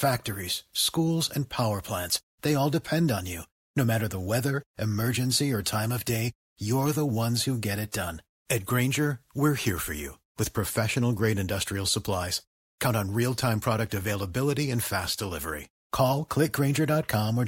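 No technical faults can be heard anywhere in the speech; the signal stays steady and continuous throughout.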